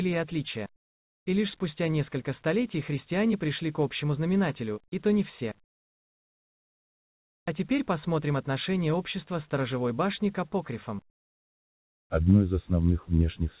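Comfort noise in place of the background appears from 11.1 to 12.1 s: for one second the real background drops out and a steady, featureless hiss takes its place, about 20 dB quieter and lacking the detail heard before and after. The background sits about 40 dB below the loudest passages, so the sender's voice detector likely judged this stretch silent and stopped transmitting, leaving the receiver to synthesise shaped noise until the sound resumed. The audio also carries nothing above 4 kHz, which fits a G.711 call path at 64 kbps.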